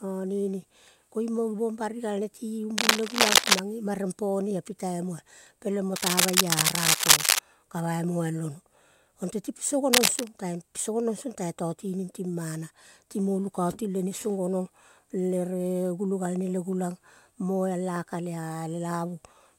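Across the whole speech recording runs sample clock jitter. The converter's timing wanders by something like a microsecond or two, so each sample lands slightly off its ideal instant, and the error grows wherever the waveform moves fastest. The result is a grainy hiss roughly 30 dB under the signal that swells on loud, bright syllables and disappears in pauses. On a spectrogram it shows as a faint broadband haze that tracks the speech energy, strongest in the upper bands.

Cable scratch noise appears from 2.77 to 3.60 s, from 5.96 to 7.39 s, and from 9.93 to 10.27 s. It sounds like harsh scratching and rustling laid over the voice and rises above the speech itself. The likely cause is a worn cable or connector being moved, its contact resistance fluttering rapidly. The waveform shows dense, irregular spiky bursts, and the spectrogram shows ragged vertical smears across the full frequency range for each stretch.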